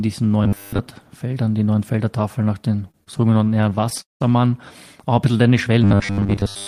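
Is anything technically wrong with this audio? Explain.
Yes, there are two problems. From 0.44 to 0.79 s, and again from 5.84 s to the end, there's robotic sound from repeated short buffers: a rigid, metallic buzz at 100 Hz. That pitch fits a roughly 10 ms chunk being looped, likely because fresh audio arrived too slowly, so most of the real signal got skipped.

Just after "nach den", from 2.91 to 4.22 s, you get repeated stalls, a stutter. Late packets kept draining the jitter buffer, and well over a dozen waits were bridged by extending the last sound, about 393 ms in total, the longest 189 ms. Nothing's lost, but it drags and hiccups.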